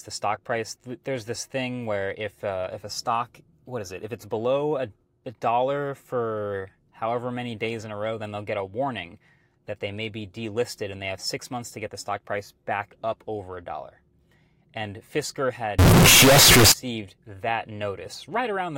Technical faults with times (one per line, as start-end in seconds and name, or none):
15.79-16.72 float read as integer